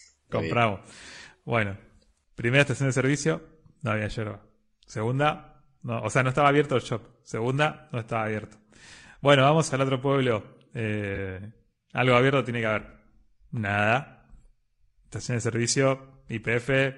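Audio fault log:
throughout, low-delay AAC compression: The audio was likely encoded with AAC-ELD, the low-delay AAC used for video calls, and the plainly audible damage fits a rate around 32 kbps. Its short frames cannot separate the voice's pitch harmonics finely and spend bits less efficiently, so the speech comes out rough and grainy. Noise fills the gaps between harmonics, and the top band sounds dulled or synthetic rather than natural.
11.15–11.18 s and 12.89–12.93 s, AAC frame loss with concealment: At each point the decoder was missing roughly 20 ms of data, which points to a single lost frame, and filled the gap by reusing the last good spectrum with altered phase or smoothed energy. Because each gap is short, the audio never drops to silence. Instead each spot turns into a brief smeared, noisy or phasey patch that blurs the speech before the decoder catches up.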